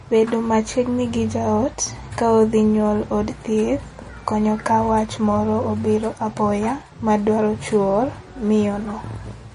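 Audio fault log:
throughout, MP3 compression: the speech has a plainly audible watery, swirly quality, and nothing sounds above 10.6 kHz, which likely comes from MP3 encoding at a low bitrate, one that fits roughly 39 kbps. With so few bits, the encoder removes all treble above a fixed cut-off and discards weak frequency components. Those components drop in and out from one frame to the next, and that flickering produces the swirling texture, while attacks are smeared.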